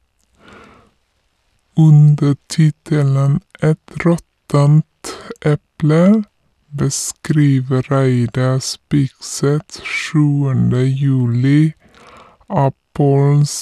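From start to finish the speech sounds low, slow and dragging, pitched down about 7 semitones and running at two-thirds speed. This is a wrong sample rate fault: playback without conversion at a lower rate than recording, which fits 48 kHz material played at 32 kHz.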